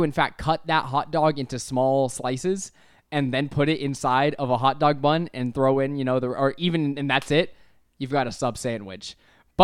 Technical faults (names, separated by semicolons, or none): none